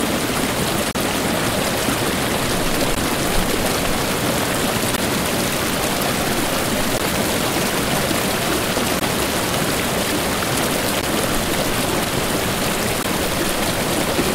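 Separately encoded two-second pieces were joined without trimming encoder delay and padding, leaving a gap at each join. The sound drops out for 35 ms from 0.91 to 0.95 s, then for 16 ms at 2.95, 4.96, 6.98, 9.00, 11.01 and 13.03 s, each time resuming where it stopped.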